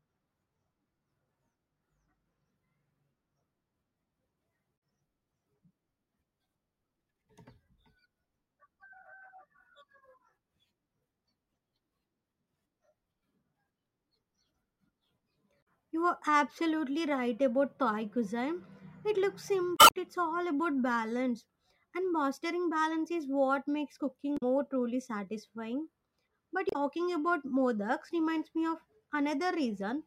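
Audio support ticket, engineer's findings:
Damaged data in a compressed stream, five hits in the speech. Short chirps, squawks, clicks or holes at 4.74–4.77, 15.59–15.67, 19.74–19.96 (longest, about 0.2 s), 24.37–24.43 and 26.69–26.76 s. Component: the encoded stream feeding the decoder. Bad bytes mean frames get misread or dropped, the decoder loses sync and hunts for the next frame header, and you get a blip each time.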